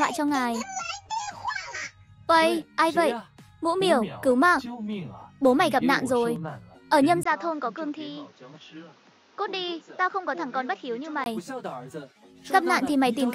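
An input switched to a poorer device, from 7.23 s to 11.26 s. A gap of about 20 ms marks the change. The band then closes off, with nothing above 7.2 kHz, so the sound turns duller and boxier. The level drops by around 5 dB, and a new background noise sits roughly 30 dB under the signal. The likely cause is the recording input changing to a lower-quality microphone or a headset call profile, before full bandwidth returns at 11.26 s.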